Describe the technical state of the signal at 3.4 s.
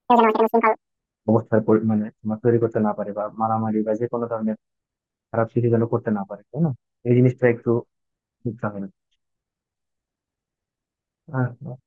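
At 3.4 s the speech signal is intact, with no audible technical fault at that moment.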